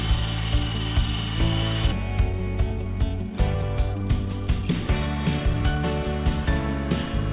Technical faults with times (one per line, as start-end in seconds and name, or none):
2.02-5.92 jitter buffer speed-up